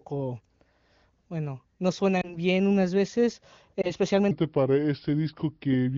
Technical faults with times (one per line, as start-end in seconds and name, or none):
2.21-2.38 lost AMR speech frames
3.81-3.92 lost AMR speech frames
4.31-5.98 section at the wrong speed